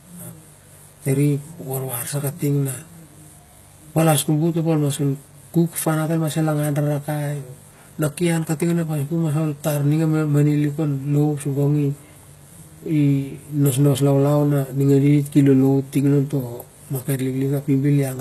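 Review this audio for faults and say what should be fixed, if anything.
DECT cordless phone buzz runs through the whole recording, from start to finish. A cordless handset or base station nearby transmits a short radio burst every 10 ms, and some part of the audio chain rectifies that energy into the signal. The result is a thin, steady buzz at 100 Hz carrying a dense stack of harmonics. It sits faint, roughly 40 dB below the speech. To prevent it, keep DECT phones and bases well away from the microphone, preamp and cabling, and use shielded, balanced connections.

HE-AAC compression is the likely cause of the coarse treble heard throughout the clip. The spectrum stops dead at about 12.3 kHz. Below that, the upper range sounds synthetic: s sounds come out gritty and lispy, with a metallic sheen, because the high band is copied up from lower frequencies and shaped by a rough envelope rather than carried directly, so its harmonics fail to line up with the real ones. 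The damage is plainly audible and fits a low bitrate of about 16 kbps. To prevent it, record and deliver at a higher bitrate with a full-band codec such as AAC-LC or Opus, or keep an uncompressed master.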